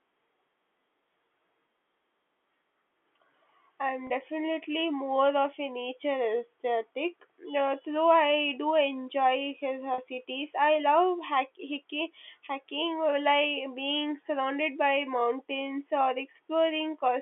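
At 4.07 s and again at 9.94 s there are two short dropouts, about 30 ms and 40 ms long. Both are packet loss with pitch repetition: the receiver lost a few packets (the lengths fit three and four 10 ms packets) and bridged each gap by repeating the last pitch period. You hear a brief held, slightly buzzy note before the speech picks back up. The whole clip is carried in the G.711 telephone band, limited to about 250–3400 Hz.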